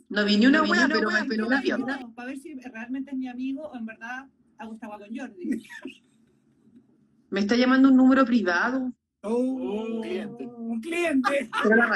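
From the very start until 2.02 s, every sound is followed by a second, slightly quieter copy of itself, trailing by a bit under half a second. The echo is about 5 dB down, full-band and dry, with no decay or room colour, so it reads as a stutter rather than reverberation, and it cuts off abruptly at 2.02 s. This doubled audio track is likely a second capture through a slower path summed into the mix.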